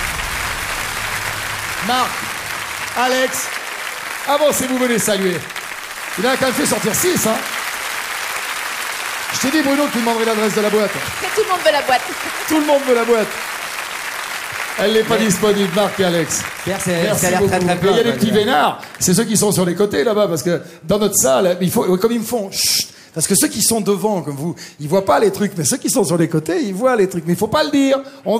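No technical faults are audible anywhere in the recording.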